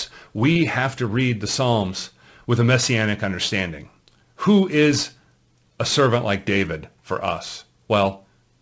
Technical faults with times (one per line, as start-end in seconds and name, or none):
0.52-0.57 short concealed packet loss